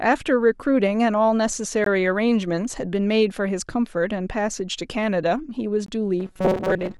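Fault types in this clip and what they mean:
Gap between stream segments: Hard-edged silences about 20 ms long cut the speech at 1.84 s and 5.86 s, four seconds apart. Nothing is lost.
Robotic sound from repeated short buffers: From 6.20 s to the end, speech becomes a rigid metallic buzz near 188 Hz, likely from repeating a roughly 5 ms buffer.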